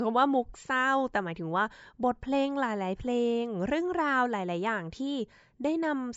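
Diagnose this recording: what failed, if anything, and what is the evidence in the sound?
Nothing in the recording points to a failure at any stage of the chain. Listening through the speech turns up no event that would need a diagnosis.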